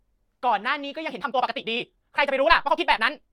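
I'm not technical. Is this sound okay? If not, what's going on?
No. From about 1.03 s to the end, the speech suddenly rushes at 1.78 times normal pace, with unchanged pitch: likely a time-stretched section, squeezed by software.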